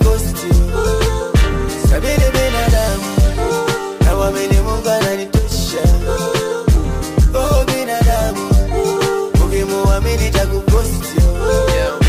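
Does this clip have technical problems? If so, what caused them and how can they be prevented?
Yes. From 5.38 to 5.51 s one channel drops out: the level dips abruptly by about 6 dB, likely because one stereo side vanished before mono summing. Secure cables and connectors, and meter both channels while recording.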